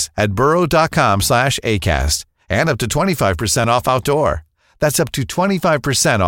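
At 5.64 s, just after "up to", there is a single tiny skip. This is audio missing between chunks. A few milliseconds of sound vanish, and the two sides butt together without silence. The likely cause is a processor losing audio while switching between 2-second chunks.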